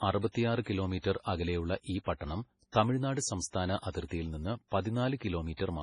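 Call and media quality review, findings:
Heavily watery, swirly speech throughout, nothing above 10.5 kHz; likely MP3 compression dropping weak bands frame to frame, fitting a very low bitrate near 24 kbps.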